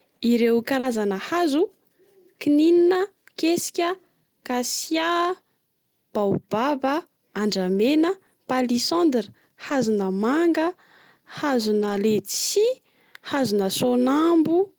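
At 0.79 s a short concealed packet loss smears about 40 ms of speech as the receiver extends the preceding sound, a wobble unlike the grainy texture of rebuilt audio. Lost packets rebuilt from error correction follow at 0.83 s (20 ms), 4.87 s (60 ms), 7.73 s (40 ms), 9.69 s (20 ms) and 11.81 s (80 ms). These keep the speech intact but sound briefly rougher and noisier, with no smear.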